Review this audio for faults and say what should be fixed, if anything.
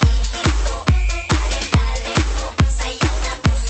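Nothing stood out on listening, so there is nothing here that needs fixing.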